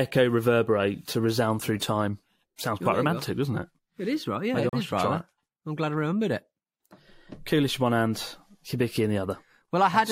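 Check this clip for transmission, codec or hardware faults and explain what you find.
One fault is audible, in the speech at 4.69 to 4.73 s: a gap between stream segments. The sound cuts to a hard-edged silence of about 37 ms, then resumes with nothing missing. Timestamps on adjacent segments left a gap, which the player filled with silence.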